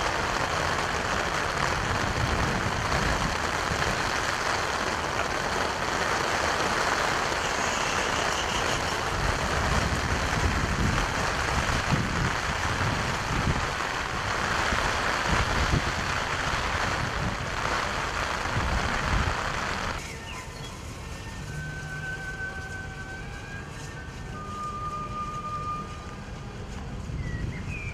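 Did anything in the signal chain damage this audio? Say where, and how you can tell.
No, nothing in the signal chain damaged this audio.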